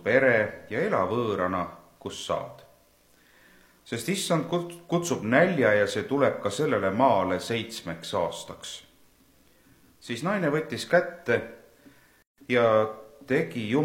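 At 12.22 s, a gap at a join of encoded pieces: untrimmed encoder delay and padding leave a 155 ms gap, with a blank spectrogram band shorter than that, before the sound carries on.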